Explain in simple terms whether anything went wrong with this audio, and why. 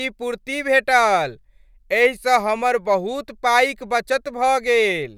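Nothing went wrong with this speech recording. At no point does anything in the sound point to a technical problem, so there is nothing to explain.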